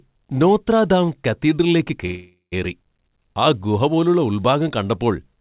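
Speech carried over a call path, with nothing above 4 kHz. After "നോത്ര ദാം കത്തീഡ്രലിലേക്ക്", a call audio freeze runs from 2.06 to 2.54 s. A fading buzz or hiss fills it, ending in about 120 ms of silence. Delayed packets likely emptied the jitter buffer. Speech then resumes intact, about 0.46 s late.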